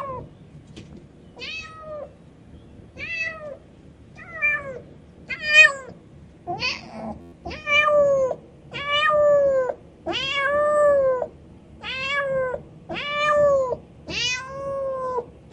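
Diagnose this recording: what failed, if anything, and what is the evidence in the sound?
A steady 86 Hz buzz replaces the sound from 7.21 to 7.33 s. This is a system hang loop: the driver stalled while the hardware replayed one 11.6 ms buffer, which fits 512 samples, ten times.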